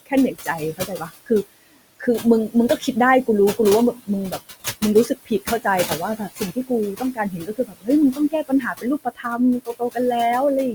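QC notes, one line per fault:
Throughout: noise suppressor artifacts. The room noise, about 15 dB below the speech, is pulled down by about 17 dB between phrases and released under them, so the background pumps. A spectrogram shows the noise floor darkening in gaps and brightening under speech, with speckled residue.
0.06–1.31 s, 1.67–2.04 s, 2.49–2.88 s, 3.95–4.43 s, 4.81–9.26 s, 9.65–9.97 s: speech cut by the noise suppressor. Soft consonants and word endings were taken for noise and dropped by about 11 to 22 dB. That is roughly 0.4 s in the first span and about a second across the long one, so those sounds come out swallowed. A spectrogram shows missing high-frequency consonant energy, and the waveform shows word tails clipped short.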